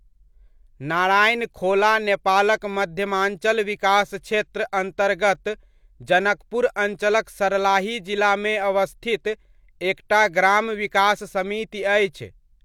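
No technical faults can be heard anywhere in the recording.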